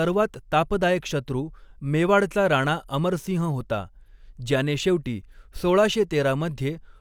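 Nothing in the recorded speech signal stands out as technically faulty, with no audible disruption or defect anywhere in the clip.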